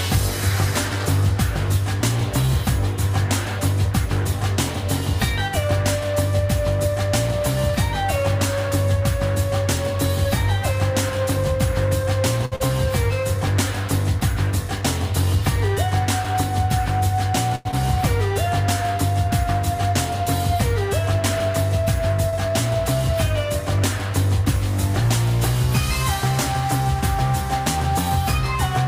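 A short stall from a late packet occurs three times, at 12.45 to 12.54 s, 17.55 to 17.67 s and 22.29 to 22.35 s. Each time the next packet arrived late, the jitter buffer ran dry, and the receiver held the last sound for 63 ms, 97 ms and 32 ms before resuming where it had stopped. Nothing is lost, but the sound hangs unnaturally with a faint buzz or dip, and each stall adds that much playback delay. Short concealed packet loss follows the first stall, from 12.56 to 12.62 s. There, 40 ms of audio never reached the decoder, so the receiver extrapolated from the preceding sound and faded back into the real signal. The result is a brief smear or wobble. A jitter buffer speed-up runs from 14.81 to 16.35 s. The buffer was holding more audio than its target, so the receiver trimmed short pitch-period slices repeatedly, taking out roughly 70 ms in total and playing at 103% speed with the pitch unchanged. 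The passage runs a little faster without being shifted in tone. A skip ahead comes at 17.71 to 17.74 s, immediately after the second stall. Later audio was already queued, so the receiver discarded around 70 ms and bridged the join with only 13 ms of fill. Playback jumps forward almost seamlessly, a fragment of sound is missing, and the delay drops by about 50 ms.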